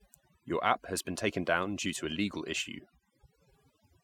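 A short speech recording with overdone noise removal running the whole way through. The reduction was set too hard, so bands near the noise estimate get pulled down or switched off, taking quiet parts of the voice too. The background drops and breaks up into twinkly specks.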